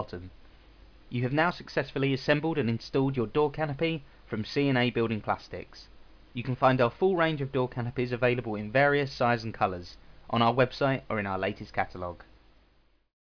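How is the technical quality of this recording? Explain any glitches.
The technical quality of this recording is good, and there are no glitches to explain.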